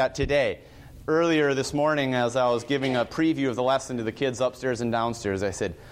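Nothing stood out as a technical problem on listening.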